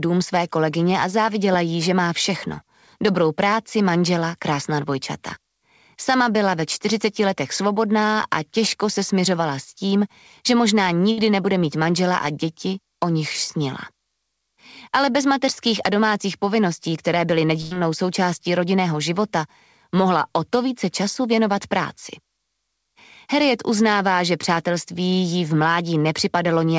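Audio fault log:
11.12–11.19 s and 17.61–17.74 s, burst of packet loss: several consecutive packets never arrived in time, so the receiver concealed each gap by extending the last good sound and fading it down. The first concealment lasts about 53 ms over 60 ms of lost audio, and the second about 95 ms over 100 ms. Playback then resumes further on, with those stretches of the original audio absent.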